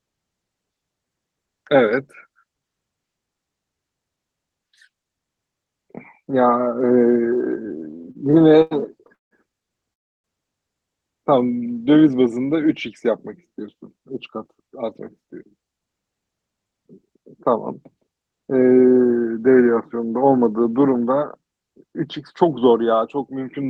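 From 7.91 to 9.33 s the speech shows repeated stalls (stutter): packets kept arriving late, so the jitter buffer ran dry 13 times in under a second and a half. Each time the receiver stretched the last bit of sound to bridge the wait, filling 418 ms in total, with the longest gap 170 ms. Nothing is lost, but about 30% of that stretch is concealment, so the speech drags and catches repeatedly.

From 9.93 to 10.26 s comes a call audio freeze, likely from packets being held up long enough to empty the jitter buffer completely. About 309 ms is inserted, and after a brief continuation of the last sound nearly all of it, some 300 ms, is silence. The speech then resumes exactly where it stopped, so the result is a sudden dead pause rather than a dropout.

Between 11.39 and 12.65 s a jitter buffer slow-down follows as the receiver builds up a reserve. It repeats single pitch periods and slivers of pause, adding 172 ms so the speech plays at 87% of normal speed without any change in pitch. 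Sounds are audibly drawn out. Inside this stretch, from 11.48 to 11.78 s, a second brief bout of repeated stalls (stutter) adds four tiny gaps of at most 8 ms each, 32 ms in all.

From 14.48 to 18.59 s the opposite happens, a jitter buffer speed-up. Too much audio had built up in the buffer, so the receiver trimmed short pitch-period pieces again and again, cutting around 0.4 s in total. The speech runs at 110% of normal speed with its pitch unchanged, and sounds noticeably hurried. Throughout, the band limit near 12 kHz and coding grain point to Opus at roughly 20 kbps on the call path.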